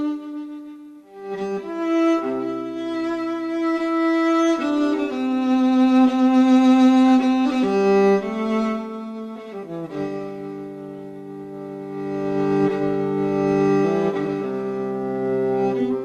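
Nothing in the audio stood out as a technical problem on listening.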